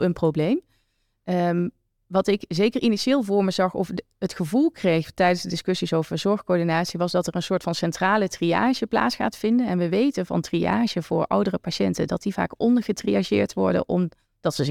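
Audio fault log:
No audible faults anywhere in this speech recording.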